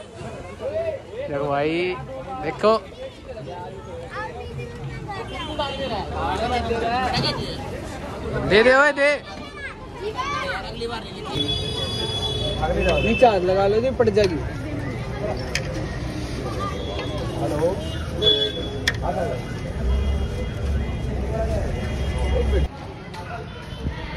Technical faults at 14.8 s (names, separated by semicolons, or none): none